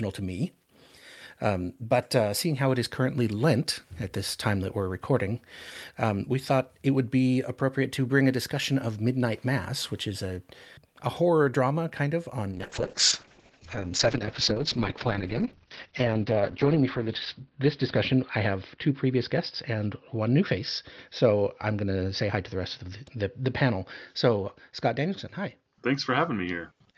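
From 12.52 s to the end, the sound turns rough and muffled, losing everything above 6 kHz: a call bitrate drop, fitting a fall from 48 to about 7 kbps.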